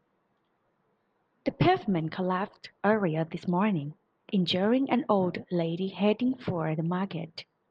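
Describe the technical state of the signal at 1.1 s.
At 1.1 s the speech signal is intact, with no audible dropout, distortion or other technical fault.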